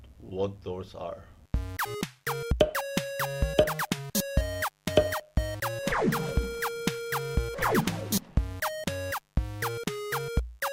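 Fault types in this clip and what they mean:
Mains buzz: A steady, raspy 50 Hz buzz runs through the whole clip, sitting roughly 40 dB below the main sound. Sharp switching spikes twice per mains cycle create it. A spectrogram shows evenly spaced horizontal harmonic lines climbing into the kilohertz range.
Skip ahead: At 1.85 to 1.87 s playback jumps forward with no gap, dropping roughly a second of audio, likely lost in transit or in an overflowing jitter buffer. The waveform shows two unrelated stretches butted together, and the spectrogram shows an abrupt vertical seam.
Jitter buffer speed-up: From 1.94 to 4.36 s the sound runs at about 107% speed with unchanged pitch, sounding hurried. Roughly 150 ms is trimmed as many small pitch-period cuts. The waveform looks compressed in time, with tiny splice points where periods were removed.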